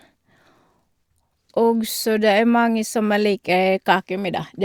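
No technical faults can be heard anywhere in this speech clip. There is nothing to mark at any point in time.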